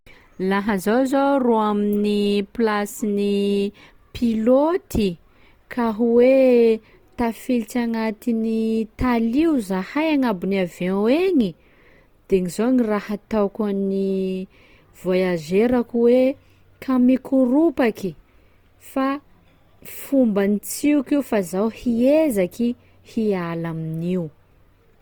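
From start to finish the speech sounds rough and grainy, with a fizzy, noise-like texture rather than swirling or watery holes, while the top end stays open all the way to about 20.2 kHz. This is likely Opus compression in its music-oriented CELT mode at a rate that fits around 24 kbps: short of bits, the encoder keeps each band's energy but fills detail with folded or noise content, so clarity turns grainy instead of dropping out.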